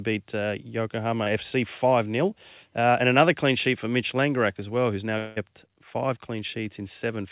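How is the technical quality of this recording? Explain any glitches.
The recording has narrowband telephone quality, with nothing above 4 kHz, which fits a G.711 A-law call codec at 64 kbps. Two glitches interrupt it.

At 1.24 to 1.28 s there is a brief smear in the speech. This is short concealed packet loss: about 20 ms of audio arrived too late, and the receiver patched the gap by extending the preceding sound.

From 5.18 to 5.38 s the speech gives way to a synthetic continuation of the last sound for about 0.18 s, then resumes with that stretch missing. This is likely a long network dropout that the receiver covered by extending the preceding sound.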